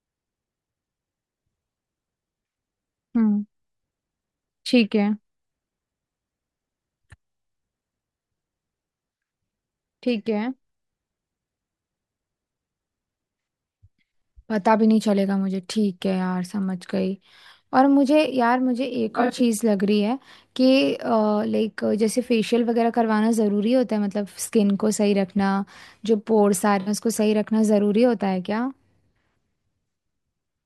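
At 19.10 to 19.41 s, AAC frame loss with concealment: about 171 ms of frames drop out, scattered across a 0.3 s stretch with no single gap much beyond 40 ms, so the decoder rebuilds each hole from the last good spectrum. It sounds like a smeared, phasey flutter; a spectrogram shows blurred, noise-filled vertical patches. A second, briefer loss at 26.80 to 26.88 s covers 64 ms and gives a single short smudge with a flattened waveform envelope.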